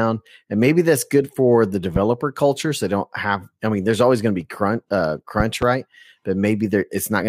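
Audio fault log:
1.96 to 1.99 s, loud pop: right after "that's good for the", a single sharp pop about 10 dB above the speech, which carries on underneath. It is likely a brief voltage step, such as from a plug, switch or static discharge, which the circuitry shapes into a short pulse. On the waveform it is a tall, narrow spike; on a spectrogram, a thin vertical stripe spanning the full frequency range.
5.40 to 5.65 s, loud pop: after "to be crunch uh", two pops in quick succession, again about 10 dB above the speech, likely from a second voltage glitch. The waveform shows two separate spikes, and the spectrogram two broadband vertical lines, with the speech continuing between them.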